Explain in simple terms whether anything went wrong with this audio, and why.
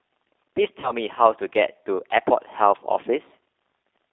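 The speech was sent through the G.729 codec, a phone codec that rebuilds speech from a simple model of the voice instead of keeping the actual sound. Only roughly 300 Hz to 3.6 kHz gets through, so the whole clip sounds thin, muffled and noticeably rough and synthetic.

From 0.80 to 0.92 s there is VoIP packet loss concealed by the speech codec. About 30 ms of audio never arrived, which points to one lost packet. The decoder filled the gap by stretching out the last sound it had, producing a short buzzy tone or coloured noise that fades, and the speech stays weak or distorted for a moment afterwards.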